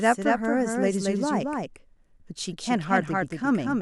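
A second capture path or an out-of-step edit has likely mixed the speech in twice, so throughout the clip a full-band copy trails the original by around a fifth of a second, about 5 dB quieter, giving a dry, undecaying doubled audio track effect.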